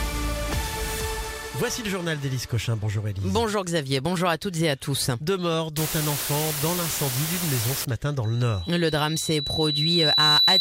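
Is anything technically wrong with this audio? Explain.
Yes, there are three separate problems.

From 5.21 to 5.26 s there's a short burst of DAB burbling. A small fraction of bit errors got past the error correction into the MP2 data, which fits about two corrupted frames. Wrong samples put short blips of noise into single sub-bands, giving a brief burst of blips.

Between 5.77 and 7.85 s it's low bit depth with dither. The hiss points to roughly 4-bit resolution. Dither turns the rounding error into steady white noise instead of distortion, so you hear an even hiss almost as loud as the sound itself.

From 8.24 s to the end there's a loudspeaker feedback squeal. The mic-to-speaker loop has more than unity gain at 4 kHz, so that tone feeds itself. It swells over about two seconds into a piercing whistle that ends up well above the sound.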